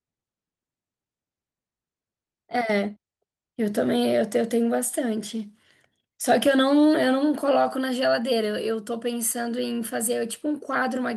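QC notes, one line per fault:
No faults heard in this speech recording.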